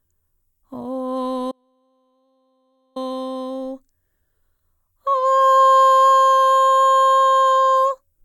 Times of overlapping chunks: none

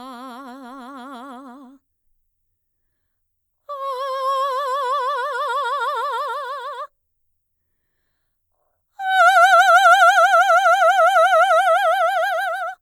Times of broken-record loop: none

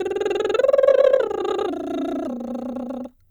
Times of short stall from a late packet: none

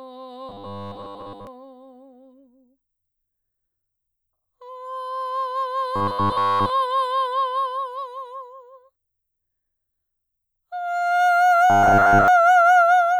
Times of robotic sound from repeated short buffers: 0.49-1.47, 5.96-6.70, 11.70-12.28

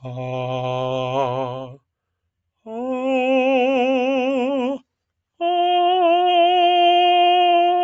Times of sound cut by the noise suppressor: 1.65-1.84

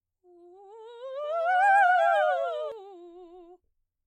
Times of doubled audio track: 1.24-2.72

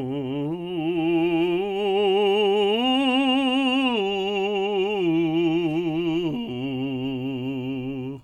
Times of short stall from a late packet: none

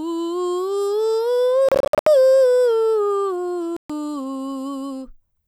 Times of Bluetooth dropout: 1.69-2.07, 3.76-3.90

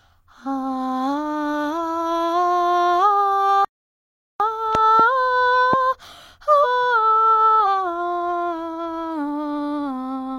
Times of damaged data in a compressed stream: 6.60-6.65, 7.62

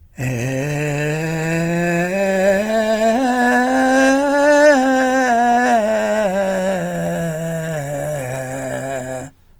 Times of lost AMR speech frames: none

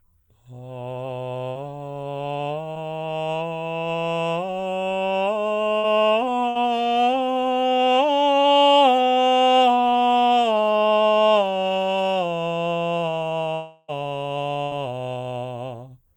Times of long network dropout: 13.55-13.90

